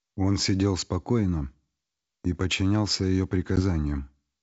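At 3.56 s the speech stops dead in a hard-edged gap of about 10 ms, roughly one packet's worth, and the disturbance lasts until 3.60 s. This is packet loss on an ADPCM call: the missing stretch is filled with silence, and because the decoder's adaptive predictor and step size were left out of step with the sender's, the returning speech comes back disturbed and takes tens of milliseconds to recover. A loss on a codec without adaptive state would instead resume cleanly right after the gap. The surrounding wideband sound points to G.722 coding at 64 kbit/s.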